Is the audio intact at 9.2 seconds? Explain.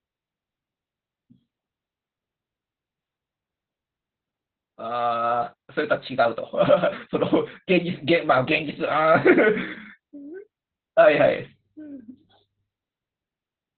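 No. At 9.2 seconds the speech carries Opus voice compression, as it does for the whole clip. The coder's linear-prediction mode has narrowed the band, so nothing sounds above about 4.3 kHz. The excitation is coded coarsely, which fits a very low bitrate near 8 kbps. The damage is heavy. The speech sounds muffled and hoarse, with a slightly robotic edge. Consonants lose their crispness.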